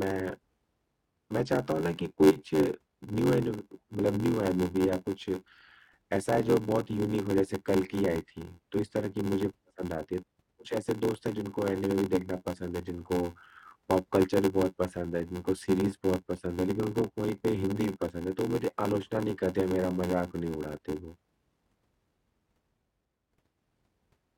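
A speech recording with a block size mismatch (padded) running through the whole thing. You hear a steady buzz at about 86.1 Hz, and everything drags at roughly 0.861 times normal speed, though the timbre stays put. That pattern fits an upstream stage writing blocks of around 441 samples into a stage reading 512. The leftover gap in every block gets filled with zeros, and those little silent slots repeating at the block rate are what make the buzz.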